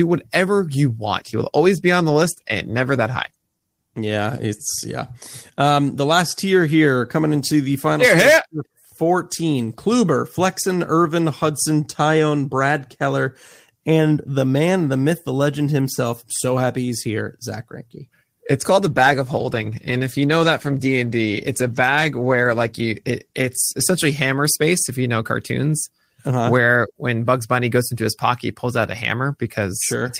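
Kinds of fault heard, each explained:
Call bitrate drop: 1.05–4.49 s and 18.82–25.71 s, speech turns coarse and muffled as the encoder gets far fewer bits, consistent with 32 kbps falling to 18 and then 14 kbps.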